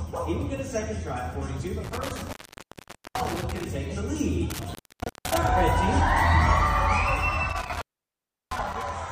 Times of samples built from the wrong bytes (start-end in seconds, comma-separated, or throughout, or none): none